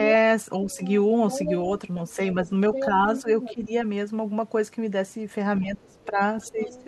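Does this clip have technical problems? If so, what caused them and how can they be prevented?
Yes. Speech suppressed in double talk shows up at 0.64–0.79 s, 2.16–3.7 s and from 5.6 s to the end. The speech dips, up to about 20 dB near the end, likely because the echo canceller ducked everything while both sides talked. A full-duplex canceller with better double-talk detection would help.

The other side's voice leaking through is heard at 0.68–1.51 s, 2.09–2.13 s, 2.74–3.54 s and 6.01–6.84 s. It runs from very faint to only about 5 dB under the speech, likely because the echo canceller left loudspeaker echo in the microphone signal. Headphones or a better-tuned canceller would stop it.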